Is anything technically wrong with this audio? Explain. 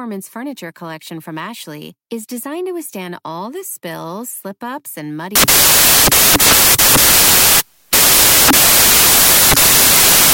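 Yes. From 5.36 s, right after "spills slip ups and", to the end, the samples are built from the wrong bytes. The reader misassembles each sample, so the rapidly changing low-order bits dominate the value, turning the speech into loud, harsh broadband noise, close to white on the louder sounds.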